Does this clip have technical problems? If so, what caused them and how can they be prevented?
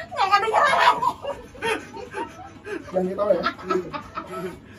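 No, there are no technical faults to point to in this clip. Since nothing went wrong, there is nothing here that needs preventing.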